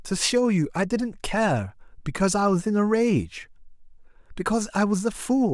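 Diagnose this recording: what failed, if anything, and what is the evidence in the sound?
Nothing failed here: the speech comes through without a single dropout, click, glitch or distortion anywhere in the recording.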